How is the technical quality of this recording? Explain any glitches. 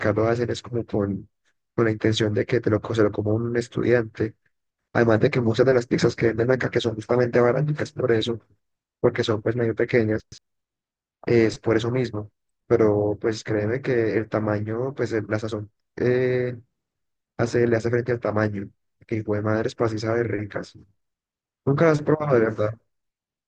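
The recording has two glitches of the same kind, chunks out of order. At 8.88 to 9.00 s and again at 10.20 to 10.38 s, a 60 ms block of sound plays late, after one and then two blocks that should follow it. Each produces a brief jumbled stutter. A waveform shows abrupt steps at the three hard joins in each event, and a spectrogram shows thin vertical broadband lines there.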